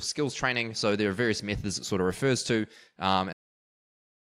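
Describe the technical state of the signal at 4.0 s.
At 4.0 s there's nothing there at all: the speech hit a cut-off end at 3.33 s and sits in flat digital silence from then to the end. The final buffers never got written, so the sound stops mid-stream with no natural decay.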